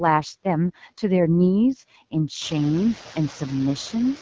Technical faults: noise suppressor artifacts; AMR wideband (HD Voice) codec

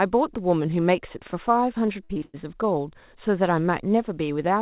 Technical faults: repeated packet loss (robotic sound)

